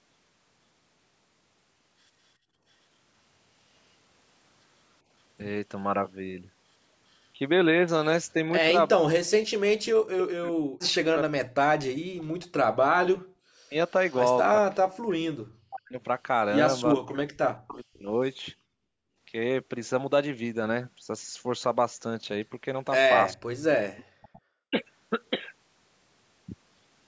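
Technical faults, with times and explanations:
2.43–2.64 s, 12.0–12.08 s, 18.57–19.18 s and 24.04–24.42 s: background gated by the echo canceller. The room sound drops by about 20, 40, 29 and 35 dB while the canceller clamps the microphone during loudspeaker playback.
8.33–18.24 s and 23.35–24.77 s: speech suppressed in double talk. The talker dips deeply, roughly five seconds in total and then briefly. This is likely the canceller muting both overlapping sides.
14.1–14.17 s and 23.97–24.4 s: echo leak. Very faint and then faint delayed copies arrive about 419 and 445 ms late, likely residual loudspeaker pickup the canceller failed to remove.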